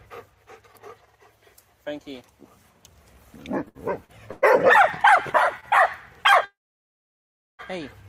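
From 3.65 to 4.44 s there are repeated stalls (stutter): four separate holds, the longest 114 ms, about 230 ms in total. Nothing is lost, but the jitter buffer kept running dry, so the sound drags in jerks rather than halting once.

A short stall from a late packet follows at 5.60 to 5.65 s. A single 23 ms hold stretches the last sound with a slight buzz or dip before it resumes. It is one brief event, unlike the stutter's cluster.

From 6.45 to 7.61 s the audio stops for 1.14 s, and about 1.06 s of that is silence after the held sound fades. It then picks up where it left off. This is a call audio freeze, likely from packets held up in transit. Its length and the silence inside it set it apart from the shorter stalls.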